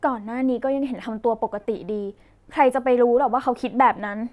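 Nothing stood out as a technical fault on listening to the speech.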